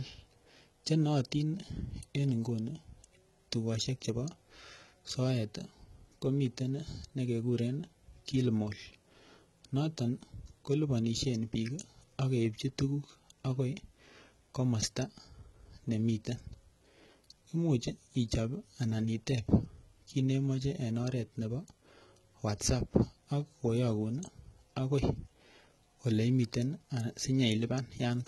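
From start to finish the speech carries heavy damage that sounds like HE-AAC compression, likely at a very low bitrate in the region of 16 kbps. The lower spectrum is coded directly, but the treble is rebuilt by copying lower bands upward, so the top end stays bright without being real. Its harmonics don't line up with the ones below the crossover, and the s sounds come out gritty, metallic and a bit lispy.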